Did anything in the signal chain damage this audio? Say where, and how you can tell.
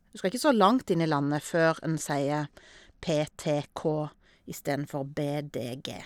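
Yes, at the codec stage: a Bluetooth SBC bit pool drop from 1.00 s to 4.35 s. Over that stretch the speech loses its treble and takes on a gritty, grainy noise floor, then brightens again once the rate recovers. With a congested link the encoder lowered its bit allocation, starving the upper sub-bands and quantising the rest coarsely. The dullness and grit point to a bit pool falling from around 28 to about 12, roughly 96 kbps.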